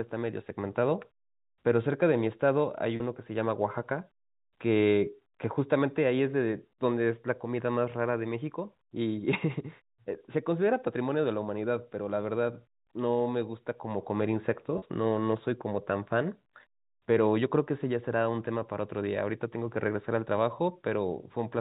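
At 2.96 s and again at 14.78 s, about 40 ms of audio was lost, which fits two 20 ms packets. Packet loss with pitch repetition filled each gap, giving a brief held, buzzy sound.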